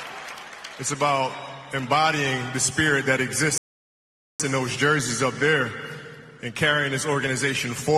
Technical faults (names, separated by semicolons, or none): rebuffering stall